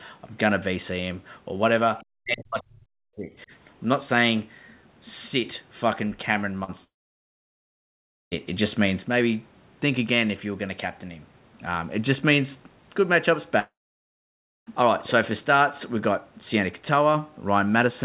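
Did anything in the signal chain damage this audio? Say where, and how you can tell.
Yes. At the call-processing stage, the echo canceller likely left some of the far end's loudspeaker playback in the microphone signal. From 2.01 to 2.05 s a faint scrap of the other side's voice leaks through, about 35 dB below the talker's speech. It is a brief fragment riding under the near-end sound rather than a sustained second voice, the residue of echo the canceller did not fully subtract.

Right after that, from 2.22 to 3.5 s, the speech is suppressed in double talk. With both ends active, the echo suppressor likely could not tell the local talker from the echo and pulled the whole signal down. The talker's speech dips and breaks up in pieces for about a second in total, at its deepest by around 40 dB, so parts of it nearly disappear.

At the network and decoder stage there is a short concealed packet loss from 6.64 to 6.71 s. 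Forty milliseconds of audio arrived too late or not at all, and the receiver bridged the gap by extending the preceding sound before crossfading back into real audio. It is heard as a quick smear or wobble, and a brief consonant in that spot can go missing.

Two long network dropouts follow, from 6.84 to 8.34 s and from 13.59 to 14.69 s. These are most likely stretches where no packets reached the receiver. About 1.5 s and 1.1 s of audio respectively are lost. In each, the concealment carries on briefly as a fading buzz or hiss, then gives way to near-silence for roughly 1.4 s and 0.95 s. The speech resumes later, with the missing portion simply gone.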